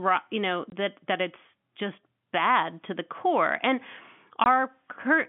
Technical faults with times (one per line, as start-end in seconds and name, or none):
0.70-0.72 packet loss filled with silence
4.44 packet loss filled with silence